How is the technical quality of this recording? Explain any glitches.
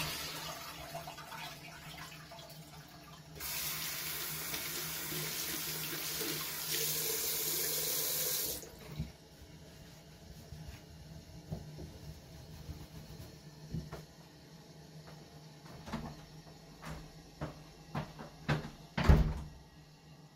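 The opening two seconds sound dull and smeared before the audio abruptly sharpens. From 0.0 to 2.0 s, this adaptive stream starting at a low bitrate lacks real treble and carries heavier codec artefacts. The player began cautiously on a lean version, consistent with Opus around 16 kbit/s, then jumped without a gap to a fuller one, plausibly near 64 kbit/s.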